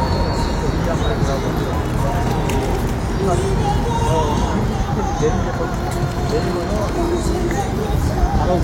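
At 1.68, 3.12, 4.60 and 6.27 s you get compressed frames skipped: whole 46.4 ms frames go missing (roughly one, two, seven, then three), so the audio lurches forward by the length of the frames left out.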